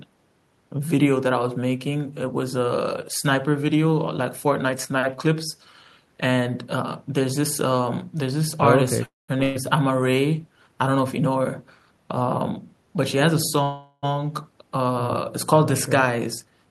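Speech with two call audio freezes, a burst of packet loss and two jitter buffer speed-ups. From 9.05 to 9.38 s the sound stops advancing: the last fragment is stretched into a fading buzz or hiss for roughly 230 ms, most of which has already decayed to silence (about 180 ms), and then the speech resumes where it left off with nothing skipped. This is likely packets held up in transit while the jitter buffer ran dry, adding about 230 ms of delay. The second freeze, 13.63 to 14.05 s, is longer, near 400 ms, and the held sound barely reaches silence before playback picks up intact, again adding that much delay and likely from the same kind of stall. Right after the first freeze, at 9.43 to 9.57 s, a burst of packet loss removes about 120 ms of speech. The receiver covers the hole with a brief decaying extension of the preceding sound, then jumps ahead, so the material in between is simply gone. 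Two jitter buffer speed-ups follow backed-up audio being drained. From 12.97 to 13.62 s playback runs about 5% fast, and from 16.18 to 16.66 s about 8% fast. In each case a few tens of milliseconds are trimmed out in small pitch-period slices, so the speech sounds slightly hurried while its pitch stays the same.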